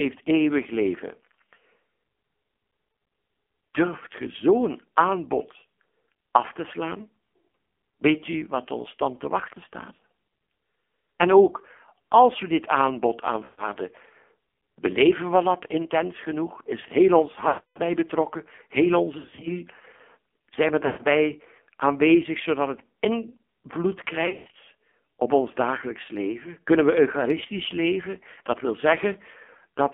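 Throughout the speech, the AMR narrowband mobile codec limits the line to roughly 250 Hz to 3.4 kHz. Heavy coding damage, which suggests a low mode near 5.9 kbps, makes the voice buzzy and synthetic. The encoder rebuilds each 20 ms frame from a vocal tract model and a few pulses, not the real waveform. A spectrogram shows a hard ceiling below 4 kHz, smeared formants and a thin low end.

Lost AMR speech frames follow. In each case the decoder stretches the last good pitch and spectral shape while the gain falls. At 2.90–3.10 s the losses are scattered, with the longest gap 40 ms, so the sound warbles briefly. After "als we dit aanbod" (13.44–13.67 s) it drags and dips. After "heel ons" (17.48–17.80 s) it fades toward silence. At 19.18–19.53 s and 20.86–21.07 s there are more warbles. Between "het invloed" and "op ons dagelijks leven" (24.26–24.57 s) a 120 ms run fades before a rough restart. 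On a spectrogram these show as frozen, repeated harmonic bands thinning out. On the waveform they show as a decaying envelope.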